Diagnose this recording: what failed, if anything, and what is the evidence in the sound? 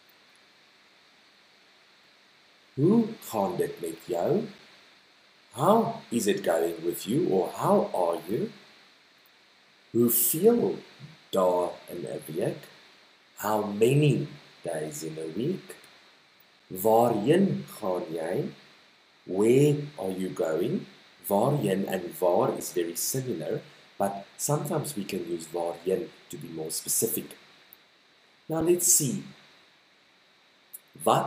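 Gaps between chunks occur at 4.58, 10.59, 16.60, 22.60 and 28.61 s. Each is a hard-edged hole of about 6.5 ms, and they recur every 6.0 s. The fault sits at the storage or playback stage, where the audio was handled in 6-second chunks. At every join a few milliseconds of silence were inserted, from padding or a late chunk start, without discarding any sound. The even spacing and the identical hole lengths point to chunk boundaries rather than random dropouts.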